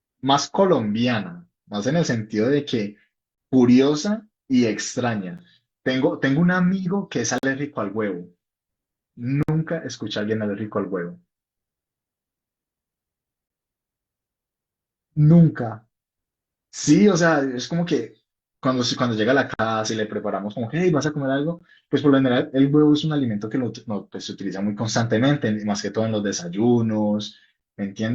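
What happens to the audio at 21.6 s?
At 21.59 s there is a gap between stream segments. The time stamps on two consecutive pieces of the stream, which sit at a 2-second boundary, fail to meet, leaving about 17 ms with no samples assigned. The player fills that hole with silence, so the speech drops out for an instant with abrupt edges on both sides: a brief, clean tick-like break rather than a fade. Nothing from the recording is missing, because the gap is added time.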